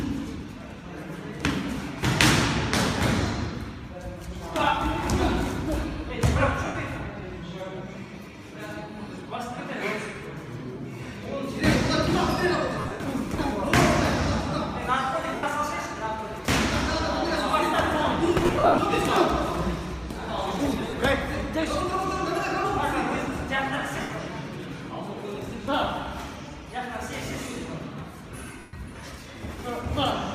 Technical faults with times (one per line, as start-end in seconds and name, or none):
6.66-6.75 lost LE Audio frames
12.80-13.00 lost LE Audio frames
15.35-15.43 lost LE Audio frames
18.40-18.78 lost LE Audio frames
20.81-20.93 lost LE Audio frames
24.01-24.10 lost LE Audio frames
28.59-28.73 lost LE Audio frames